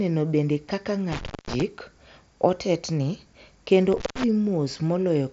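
A loose cable or plug briefly losing contact is behind the two dropouts in this speech, an intermittent contact fault. From 1.12 to 1.62 s the connection opens for about 217 ms, and from 3.92 to 4.24 s, right after "otetni kendo", for about 158 ms. Each time the signal cuts out with crackle at the break and remake, leaving only faint hiss in the gap, all within the wideband range of the Bluetooth mSBC headset codec, which has nothing above 7.7 kHz.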